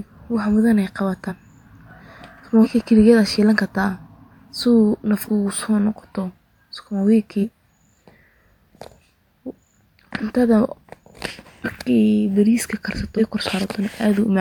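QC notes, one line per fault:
1.28–1.33, 2.63–2.67, 4.30, 5.27–5.29, 7.41–7.44, 11.64–11.66, 13.17–13.20 s, compressed frames skipped: the decoder dropped whole frames, so the speech jumps ahead by about 100 ms at most points, about 150 ms at 13.17 s, about 200 ms at 5.27 s and about 300 ms at 4.30 s. These jumps fit frames of about 46 ms.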